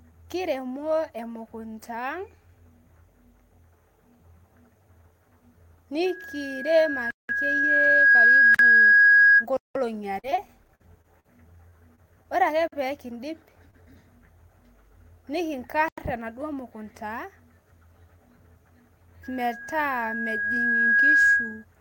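From 6.06 to 9.46 s, a loudspeaker feedback squeal builds over roughly two seconds into a 1.6 kHz tone well above the speech. The microphone's loop gain exceeded one at that frequency. A spectrogram shows one bright horizontal line thickening as it grows.

Blocks of digital silence fall at 7.11 s (186 ms), 8.55 s (46 ms), 9.57 s (186 ms), 12.68 s (46 ms) and 15.88 s (93 ms). The output buffer went unfilled, which fits blocks of 2048 to 8192 samples. Each is heard as a short hole and appears as a flat silent stretch with vertical spectrogram edges.

From 10.19 to 11.26 s, repeated packet loss produces choppy, robotic speech. Eleven gaps, the longest about 45 ms, were patched by extending earlier sound, leaving repeated smeared, stripey spectral stretches.

Short concealed packet losses at 11.69, 11.95 and 13.71 s each patch about 20 ms. They are heard as brief smears or wobbles and appear as small blurred slivers.

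From 19.23 to 21.65 s, a second feedback squeal at 1.6 kHz swells over about two seconds, somewhat weaker than the first, and shows again as a steady line.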